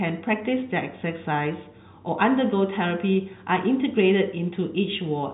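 No technical faults can be heard anywhere in this speech. The G.711 telephone coding shows as a band limit, with nothing above about 3.8 kHz, and its coding is at most faint, which fits A-law at 64 kbps.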